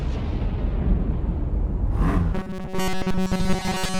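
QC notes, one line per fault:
2.34 to 4.00 s, robotic sound from repeated short buffers. The sound turns into a rigid, metallic buzz with a fixed pitch of 188 Hz that still roughly tracks the contour underneath. It lasts to the end of the clip. The likely cause is new audio arriving too seldom, so the same fragment of about 5.3 ms is replayed over and over. Most of this stretch is repeated material, and the real audio in between is skipped. That steady repetition imposes the 188 Hz buzz.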